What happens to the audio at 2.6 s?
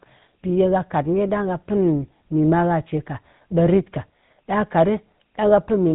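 At 2.6 s the speech carries the same GSM full-rate codec damage that runs through the whole clip. The vocal tract is modelled and driven by a thinned pulse excitation, so it's plainly buzzy and gravelly, with nothing above 3.8 kHz, which fits a 13 kbps coder.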